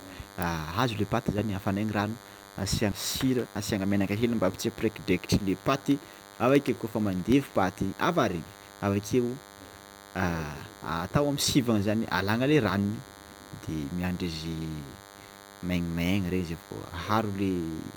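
A thin, steady buzz runs under the speech from start to finish. It is DECT cordless phone buzz. A DECT handset or base station nearby sends a radio burst every 10 ms. The audio circuit picks it up and rectifies it. The result is a 100 Hz tone rich in harmonics, so it sounds edgy rather than like a low hum. It sits roughly 20 dB below the speech.

From 3.02 to 4.24 s the speech suddenly hurries. This is a jitter buffer speed-up. The receiver had built up more delay than it wanted, so it trimmed small slices of pitch period, one after another. The playback runs at about 110 percent of normal speed. Pitch does not change. Roughly 150 ms of audio is taken out in this stretch. The speech sounds rushed.

From 5.21 to 7.32 s a regular ticking appears. These are periodic USB or driver dropouts. Something stalls the audio driver or the USB bus every 64 ms. Each time, a tiny sliver of audio, well under a millisecond, is replaced by silence. 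That happens about thirty times. The gaps are too short to hear as gaps. Each one is heard as a small click, and the clicks come only where speech is present.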